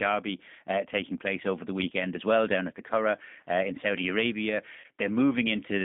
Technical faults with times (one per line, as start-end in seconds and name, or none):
0.00-5.85 G.729 codec
4.80-4.86 VoIP packet loss concealed by the speech codec